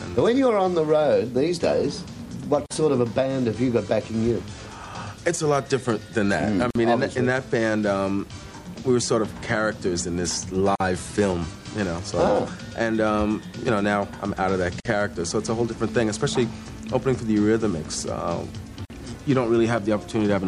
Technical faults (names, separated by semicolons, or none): MP3 compression; gap at a join of encoded pieces